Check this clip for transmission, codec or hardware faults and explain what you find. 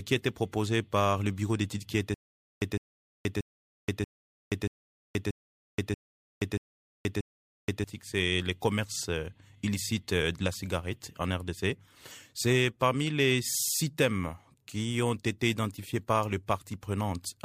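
One fault is present, a stutter with silent gaps, from 2.14 s to 7.84 s. The playback or stream likely stalled, and each retry replayed the last fragment it held before running dry. The same burst of about 156 ms returns nine times, each followed by about 477 ms of dead digital silence, so it repeats at an even 633 ms pace. Whatever audio belonged in that stretch never arrives.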